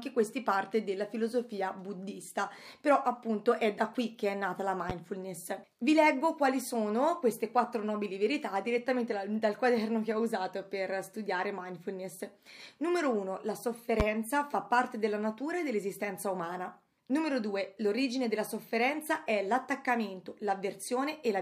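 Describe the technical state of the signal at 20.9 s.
At 20.9 s the signal is intact, with no audible fault at that moment.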